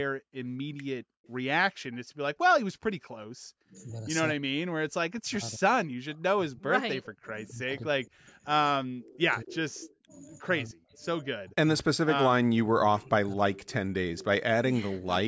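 At 1.24 s and 1.93 s, faint scraps of echo leak appear, delayed copies of the speech trailing by 223 ms and sitting very low, roughly 35 to 40 dB under it. The likely cause is a far-end loudspeaker whose echo canceller let residual pickup return. From 3.63 to 3.75 s, then 4.36 to 8.27 s and 8.74 to 13.41 s, the speech suppressed in double talk dips and breaks up by roughly 30 to 40 dB, about three seconds in each long stretch. This is likely suppression triggered when both sides spoke at once. Echo leak returns, clearer at roughly 20 to 25 dB down with the same 223 ms delay, at 9.8 to 9.95 s, 13.55 to 13.74 s and 14.16 to 14.25 s.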